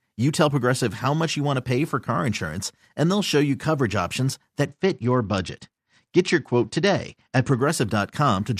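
A Bluetooth SBC bit pool drop runs from 4.66 s to 7.61 s in this speech recording. For nearly three seconds the encoder is starved of bits, as happens when a phone throttles the bit pool on a congested link. The highest sub-bands lose their allocation, so the treble goes dull, and the remaining bands are quantised coarsely enough to add a gritty noise. The degradation fits a fall from a bit pool near 28 to about 9, around 78 kbps, until the rate recovers.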